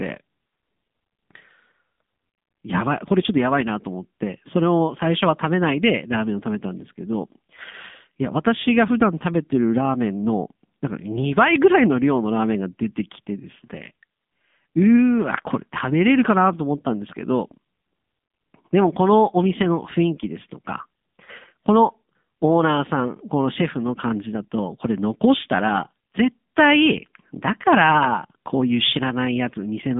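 From the first second to the last, the speech carries the sound of an AMR narrowband mobile codec. It sits in a phone-line band of roughly 200 Hz to 3.6 kHz, with nothing at all above 3.7 kHz, so sibilants go dull and the low end thins out. The codec rebuilds the voice from a vocal-tract model fed with sparse pulses, and the damage is plainly audible. There's a buzzy, synthetic edge that fits one of the lower AMR-NB modes, around 7.4 kbps.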